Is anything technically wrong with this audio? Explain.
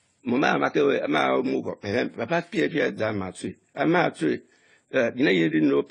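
Yes, there are two faults in this speech.

Transcoding between lossy codecs, throughout: the audio likely passed through AAC then Vorbis. Stacked artefacts from both coders are audible, with nothing above 10 kHz.

Clock slip clicks, 0.11 to 5.90 s: unsynchronised clocks, likely about 700 ppm apart, drop or repeat single samples roughly every 30 ms, producing a soft rattle.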